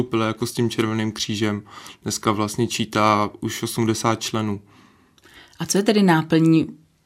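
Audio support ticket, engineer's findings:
No faults found on the speech clip. Nothing audible to trace to any component in the chain; ticket can close.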